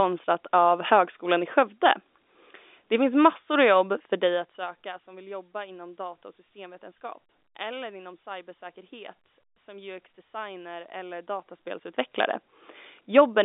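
No technical faults can be heard in this recording.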